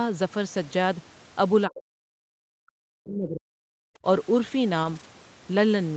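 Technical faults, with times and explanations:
0.69–0.71 s, 3.21–3.27 s and 4.83–5.05 s, lost packet rebuilt from error correction: the speech never drops out, but these stretches of 20 ms, 40 ms and 120 ms turn briefly rougher and noisier. The lengths suggest one, two and six lost 20 ms packets. Each missing packet was replaced by the low-bitrate backup copy carried in the following Opus packet, so the gap is filled with a coarser version of the same sound.
1.67–2.36 s and 2.63–3.69 s, speech suppressed in double talk: the speech sinks steeply, by about 40 dB at its deepest, over roughly 0.7 s and then about 1 s. This is likely the echo canceller clamping down while the far end was also talking. It could not tell the local voice from loudspeaker echo, so it attenuated everything, against the audible 8 kHz ceiling of the call's Opus link.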